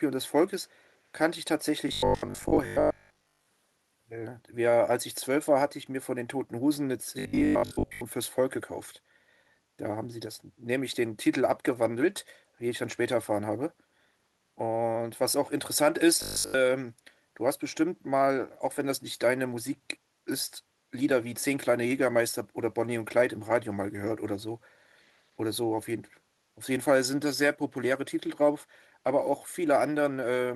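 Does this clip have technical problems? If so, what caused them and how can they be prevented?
Yes. The first problem is an echo leak. The far end was likely playing the call over a loudspeaker, and its echo canceller let a small part of the microphone pickup through. Between 0.66 and 0.91 s, a delayed copy of the speech, lagging by 287 ms, can be heard very faintly, roughly 40 dB below the direct sound. Using a headset at that end, or tuning its echo canceller, would prevent this.

The second problem is robotic sound from repeated short buffers. Audio was likely arriving too late, so the playback software kept repeating the last buffer to fill the gap and skipped the real material. At 1.89 to 3.47 s and 7.19 to 8.01 s, most of the sound is replaced by repeats. At 16.22 to 16.54 s, it is replaced entirely. Each stretch carries a rigid metallic buzz at 50 Hz, which fits a 20 ms buffer. A larger jitter buffer and a steadier network connection would prevent this.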